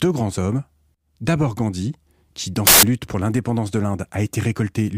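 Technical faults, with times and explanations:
2.67 to 2.83 s, samples built from the wrong bytes: for about 0.16 s the speech is replaced by loud, harsh broadband noise. Each sample has been assembled from misaligned or swapped bytes, so the rapidly varying low-order bits land in the most significant position and dominate the output.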